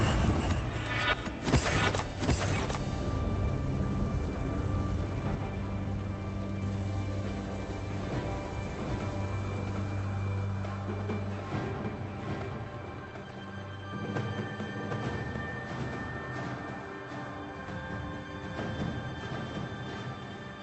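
From start to finish the audio carries a doubled audio track: a second, full-band copy trails the first by roughly 0.7 s at about the same level, so every onset is answered by a dry, uncoloured repeat with no decay. The likely cause is the same signal being captured again through a slower path. On a waveform each transient appears twice at a fixed spacing. A spectrogram shows every event repeated as a matching ghost, both cut off above 8 kHz by the Opus call path.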